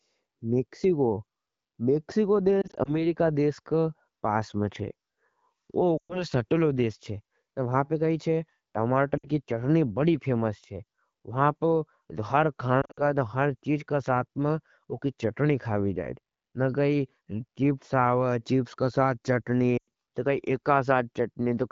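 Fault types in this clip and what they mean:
Lost AMR speech frames: radio errors corrupted frames, so the wideband decoder repeated the last good pitch and vocal tract settings at falling gain. Five brief patches, from about 2.6 to 19.9 s, each leave 60 to 120 ms of dips, warbles and fading speech.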